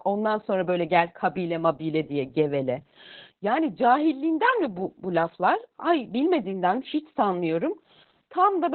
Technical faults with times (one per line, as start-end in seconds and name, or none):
0.00-8.74 Opus voice compression